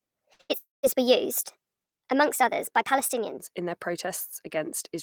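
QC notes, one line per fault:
0.00–3.37 s, section at the wrong speed: the opening speech runs 1.25 times too fast, so it sounds hurried and pitched up about four semitones, with speed and pitch shifting together. That's likely playback or editing against the wrong clock before it settles back to normal.
0.33–0.41 s and 0.41–0.51 s, burst of packet loss: two back-to-back gaps. The receiver stretched the last sound into a fading buzz or hiss for about 57 ms, then 84 ms. Roughly 60 ms and 80 ms of speech are simply skipped when it resumes.
0.58–0.85 s, long network dropout: a longer stall. The held sound fades out over about a quarter second and leaves about 160 ms of near-silence, and around 260 ms of speech is lost outright. It's likely a network interruption rather than a local glitch.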